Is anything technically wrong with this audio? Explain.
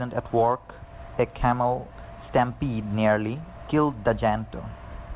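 No, nothing in this speech stood out as technically wrong on listening.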